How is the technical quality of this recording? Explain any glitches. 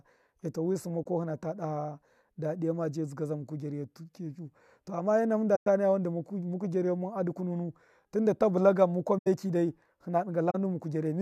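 The recording has four short glitches, all corrupt frames concealed by the decoder. They occur at 1.03–1.06 s (after "eto amma wi sṫmma", before "ko hina ta"), 5.55–5.66 s (between "amma ena" and "daha wan"), 9.18–9.27 s (after "ta bulta gan mukwa") and 10.50–10.55 s. In each, corrupted AAC data was detected and replaced by muting or a scrambled reuse of the previous spectrum. The affected spans last about 25 to 110 ms.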